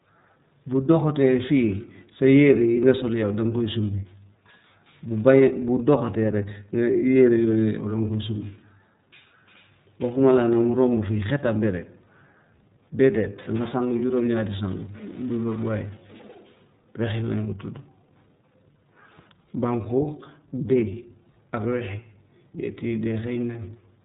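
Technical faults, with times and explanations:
Throughout, iLBC codec: the speech is squeezed into a narrow band with nothing above 3.8 kHz, so it sounds boxed-in and phone-like, and the codec damage is plainly audible as a rough, slightly synthetic edge. Each block of sound is coded on its own, without borrowing from the one before, which produces that grainy texture. The character fits the 30 ms frame mode, running at about 13.33 kbps.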